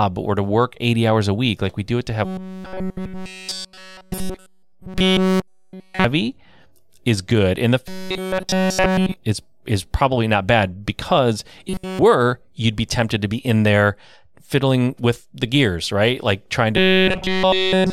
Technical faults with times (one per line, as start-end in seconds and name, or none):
2.25-6.04 robotic sound from repeated short buffers
7.88-9.16 robotic sound from repeated short buffers
11.68-11.99 robotic sound from repeated short buffers
16.77-17.92 robotic sound from repeated short buffers